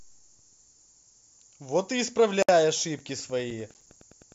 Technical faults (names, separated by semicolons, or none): gap at a join of encoded pieces; Wi-Fi interference; processor overload crackle